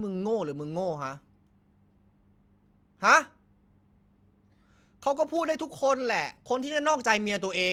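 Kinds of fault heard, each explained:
No technical fault can be heard in this speech recording, with the signal holding steady and intact throughout.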